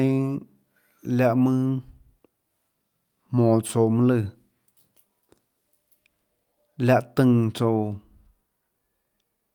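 At 3.67 to 3.71 s, a late packet emptied the jitter buffer, causing a short stall: about 17 ms of held speech, nothing lost, everything after slightly delayed.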